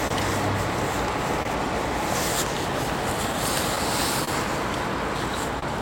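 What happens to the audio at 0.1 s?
A short stall from a late packet runs from 0.07 to 0.13 s. The jitter buffer emptied, so the last sound was stretched for about 29 ms, with nothing lost. Underneath this, clock drift between sender and receiver continues, with the sender running roughly 2% slow, producing small recurring timing hiccups.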